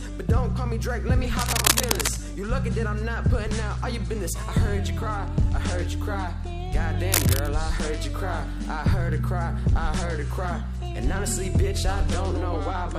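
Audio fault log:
1.36–2.18 s and 7.12–7.48 s, cable scratch noise: two bursts of dense, ragged scratching and rustling sit over the sound, the first lasting about 0.8 s and the second under 0.4 s, each roughly as loud as the sound itself. The crackle is irregular, with no steady tone or rhythm. This likely comes from a worn cable, connector or control being disturbed, so that its contact resistance jumps about quickly and injects uneven noise into the signal.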